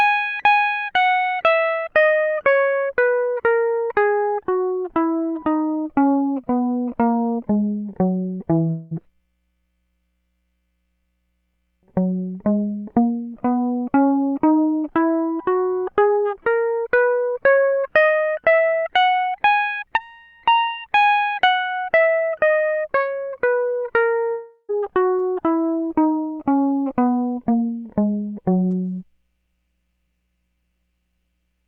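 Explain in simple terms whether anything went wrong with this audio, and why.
At 8.69 to 8.93 s and 24.31 to 24.71 s, the music briefly turns into a fading buzz, the second time dropping to silence before returning, with those moments simply gone. This is likely a long network dropout: audio stopped arriving, so the player stretched the last sound.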